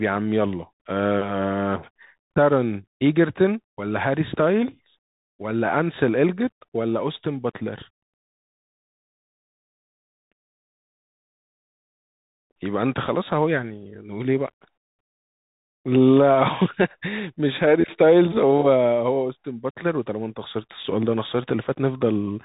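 A speech clip run through a Bluetooth CVSD headset codec the whole way: nothing above 3.8 kHz, scratchy sibilants, granular hiss, and plainly audible one-bit slope distortion, consistent with a 64 kbit/s headset link.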